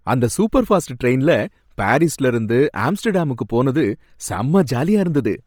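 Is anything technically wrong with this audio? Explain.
Yes. The whole clip has a breathy, grainy edge on the speech, the sort of hashy fizz you get when a codec discards most of the upper detail and papers over it with noise. That's most likely Bluetooth LC3 compression pushed hard. The damage is heavy and fits a low rate around 32 kbps with 10 ms frames. The sound still reaches about 20.2 kHz, but the top is synthetic noise rather than real detail.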